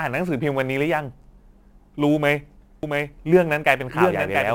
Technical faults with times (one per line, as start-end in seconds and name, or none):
0.00-4.55 sample clock jitter
2.83-4.55 doubled audio track